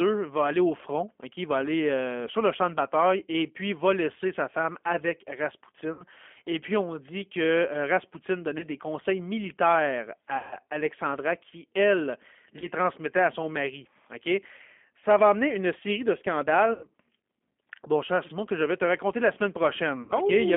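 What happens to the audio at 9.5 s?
At 9.5 s the speech is coded through G.729, as it is for the whole clip. The codec rebuilds each 10 ms frame from a vocal tract filter, a pitch predictor and a few fixed pulses, sent at 8 kbit/s. The band is held to roughly 250 Hz to 3.4 kHz, so it sounds thin and boxy. The codec damage is plainly audible. The speech stays intelligible but has a rough, buzzy, synthetic edge.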